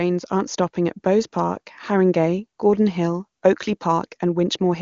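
Nothing stood out on listening to this speech recording, which is carried over the AMR wideband (HD Voice) codec at 23.85 kbit/s with nothing above 7.1 kHz.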